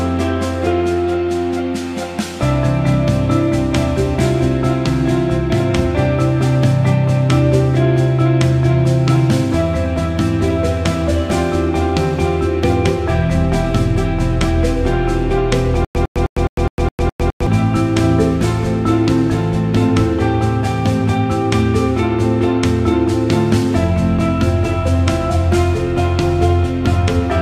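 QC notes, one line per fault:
15.85–17.47 s, stutter with silent gaps: a 105 ms fragment repeats eight times at a steady 208 ms period, each followed by about 102 ms of digital silence, likely from a stalled stream replaying its last buffer on each retry. The intended audio there is missing.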